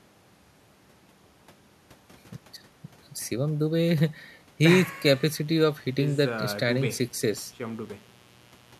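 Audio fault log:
4.65 s to the end: mains buzz comes in under the speech, a steady raspy drone built on 60 Hz and its harmonics climbing into the kilohertz range. It sits roughly 35 dB down, fairly low, like sharp switching spikes from a dimmer or rectifier leaking in twice each mains cycle.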